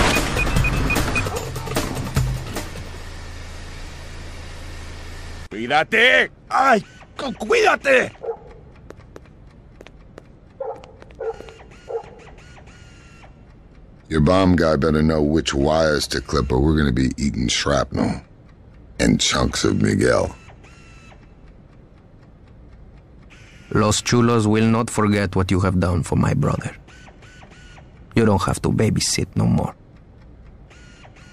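No dropouts, clicks, distortion or other technical faults can be heard anywhere in the recording.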